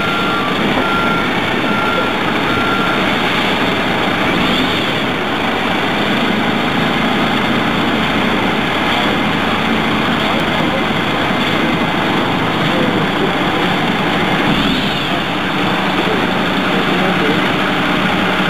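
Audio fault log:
3.6–4.0 s and 10.2–10.6 s: chunks out of order. Two adjacent 200 ms chunks play swapped, jumbling the sound briefly, with three hard joins.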